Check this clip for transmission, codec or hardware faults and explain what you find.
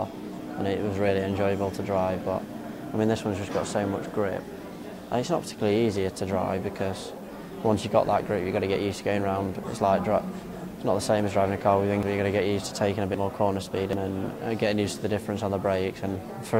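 Three abrupt skips occur near the end of the clip.

Dropped buffer (overrun) at 12.03, 13.14 and 13.93 s: the hardware likely overwrote samples before the program collected them. The audio then jumps ahead, losing around 50 ms at the first two points and around 150 ms at the last.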